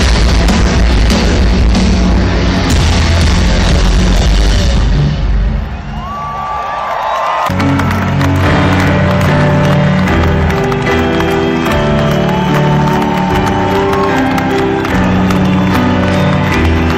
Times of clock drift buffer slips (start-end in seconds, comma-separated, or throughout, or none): none